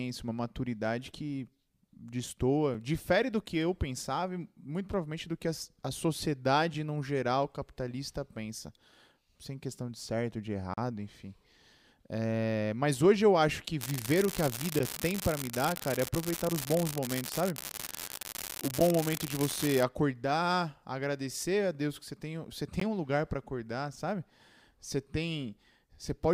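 In this speech recording, the time stamps of consecutive stream segments fail to line up, so the player pads each mismatch with silence. This gap between stream segments produces hard-edged dropouts at 2.74 s, from 10.74 to 10.78 s, at 14.79 s and at 22.80 s, adding about 4.4, 36.1, 11.3 and 15.7 ms of time respectively. Their spacing falls on multiples of 4 s, matching the segment length. No audio is lost, only delayed. Separately, from 13.81 to 19.83 s, a marginal data line flips one bit in a random share of samples. This unreliable data bit injects identical spikes that build into a steady crackling fizz. It persists through pauses as well as under the speech, and it overlaps the 14.79 s gap.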